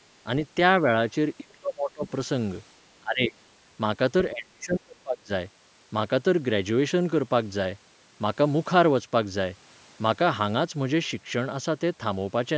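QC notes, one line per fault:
1.39–2.05 s, 3.01–3.35 s, 4.33–5.30 s: speech suppressed in double talk. The speech sinks sharply, by about 30 dB at its deepest in the first and third spans and about 20 dB in the second. The likely cause is an echo canceller that could not separate the talker from loudspeaker echo, so it turned both down.
2.06–2.10 s: other side's voice leaking through. A brief scrap of a second voice appears just after the first dip, about 20 dB below the speech. It is likely loudspeaker playback that the echo canceller left in the microphone signal.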